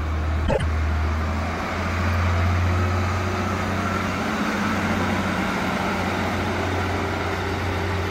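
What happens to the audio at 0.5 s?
From 0.47 to 0.63 s, frames arrive out of order: two adjacent blocks of about 52 ms play swapped, giving a garbled flutter. Unlike a skip or dropout, no time is lost.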